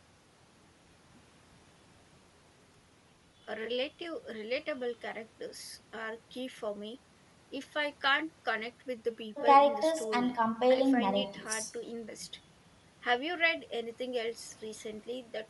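Speech encoded by what is likely Bluetooth LC3 compression throughout, with damage that fits a 48 kbps stream cut into 10 ms transform frames. The codec gives the speech a plainly audible breathy, grainy edge.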